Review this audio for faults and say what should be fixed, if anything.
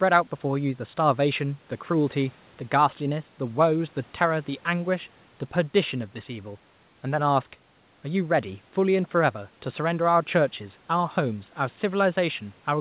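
Nothing in this speech needs fixing; a review finds no faults.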